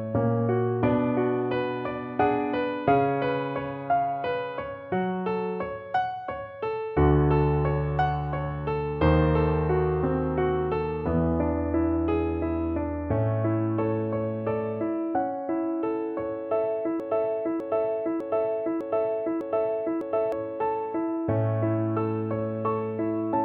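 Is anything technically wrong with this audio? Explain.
Yes, there's one clear problem. From about 17.00 s to 20.32 s the audio turns into a broken-record loop: a 0.6-second fragment plays six times back to back, each repeat identical, so it sounds like a skipping CD. The likely cause is the player, encoder or stream stalling and re-sending the last chunk it had buffered. Whatever should have played during those three-odd seconds is simply gone.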